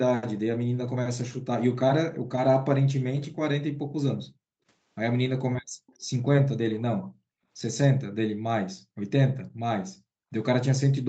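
Background gated by the echo canceller at 2.11–2.22 s and 3.77–4.45 s: the canceller clamps the microphone hard while the loudspeaker plays, so the room sound drops by about 40 dB before returning. The same gating dip recurs at 5.61–5.74 s. Echo leak at 5.87–5.96 s, 6.74–6.82 s and 9.39–9.44 s: brief, very faint scraps of the speech come back 284 ms late. This is likely what a loudspeaker-side echo canceller failed to remove. Further gating dips in the background come at 8.30–8.42 s and 10.05–10.20 s, each a short drop of about 40 dB.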